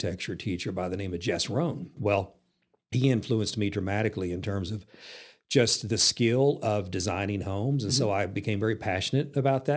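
Gritty, metallic sibilants run through the whole of this speech recording, with the high band packed with energy right up to a hard edge near 8 kHz. That is aliasing: the audio was resampled to a lower rate, which fits a drop from 48 kHz to 16 kHz, without first removing content above the new 8 kHz limit. Those higher frequencies fold back below 8 kHz as unrelated tones, sitting around 20 dB under the speech itself.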